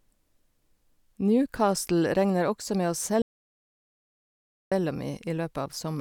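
At 3.22 s the speech cuts to dead silence until 4.72 s, an audio dropout to silence. Input was likely lost while recording continued, erasing 1.5 s.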